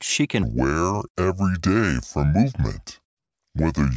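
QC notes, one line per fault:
0.43–3.97 s, wrong sample rate: the samples are played back more slowly than they were captured, with no rate conversion. The drop to two-thirds speed and about 7.0 semitones lower fits 24 kHz material played out at 16 kHz. From 0.43 s to the end, the speech sounds deep and dragging, because stretching every sample in time slows the speech and lowers its pitch by the same ratio.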